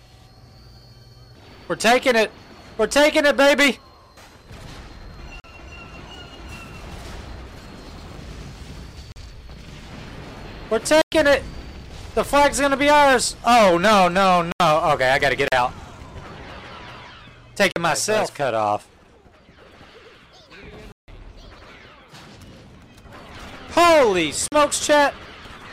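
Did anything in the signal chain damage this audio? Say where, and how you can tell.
Yes. There are blocks of digital silence at 5.40, 9.12, 11.02, 14.52, 15.48, 17.72, 20.92 and 24.48 s. Each cuts hard to silence and back. Most are 40 ms long, with an 80 ms one, a 160 ms one, and a 105 ms gap at 11.02 s. Those 40 ms steps point to the driver or buffer stage: the program sometimes missed its deadline, so whole output buffers went out empty.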